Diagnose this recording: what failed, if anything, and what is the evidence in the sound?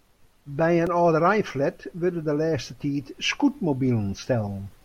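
A repeated buffer at 0.87 s is a driver or buffer-stage failure. A 1.33 ms slice of the speech plays three times, which fits a 64-sample buffer, and a few milliseconds of new audio are lost. It sounds like a brief click or buzz. The waveform shows an identical periodic block with hard joins, and the spectrogram shows a thin vertical streak.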